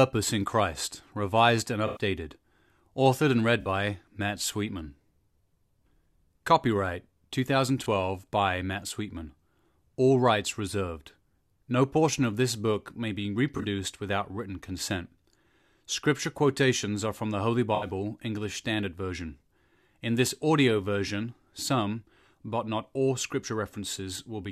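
Speech with five short stretches of corrupt frame concealed: 1.86–2.01 s after "revised and", 3.61–3.68 s, 7.84–7.86 s, 13.57–13.65 s between "this book may be" and "without written consent", and 17.75–17.87 s. Damaged AAC frames were muted or smeared over by the decoder.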